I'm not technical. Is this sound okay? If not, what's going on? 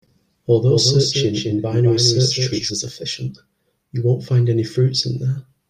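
No. From 0.68 to 2.7 seconds there is a doubled audio track: the same speech was likely picked up a second time through a slower route, or an edit left two copies slightly out of line. You hear the speech plus a somewhat quieter copy trailing about a fifth of a second behind, like a stutter or slapback rather than a natural room echo. The second copy switches on and off suddenly at those two points.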